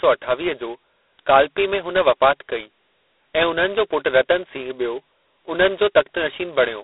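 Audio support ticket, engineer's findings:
G.726 ADPCM, whole clip. Harsh, rasping hiss that tracks the speech level. Band 300 Hz to 3.7 kHz, nothing above 3.9 kHz. Probable component: telephone codec. Too few bits per sample for the prediction error. Fits 16 kbit/s mode.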